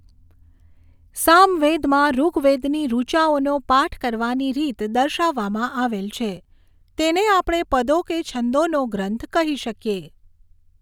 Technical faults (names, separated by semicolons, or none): none